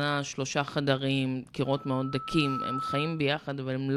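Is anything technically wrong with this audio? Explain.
Yes, there's a loudspeaker feedback squeal from about 1.65 s to 3.33 s in this speech clip. A single tone near 1.3 kHz swells up over roughly a second until it's about as loud as the speech itself, then stops. The microphone was picking up the speaker it was feeding, and at that one frequency the loop gain went above unity, so the tone kept reinforcing itself each time around.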